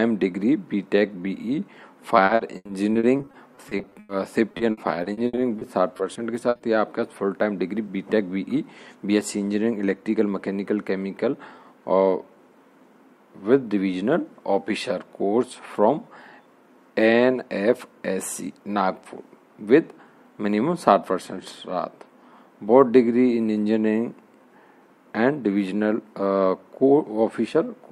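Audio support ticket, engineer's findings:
Repeated packet loss (robotic sound), 2.25–4.11 s: choppy stretch with pieces missing, many short holes (longest 100 ms) bridged by repeating the last sound, roughly 29% of span concealed. Probable component: network jitter buffer with concealment. Recurs 4.51–6.61 s, shorter holes (longest 60 ms), about 19% concealed. Distinct from a single dropout by the rapid repetition, and from codec warble by the missing pieces of sound.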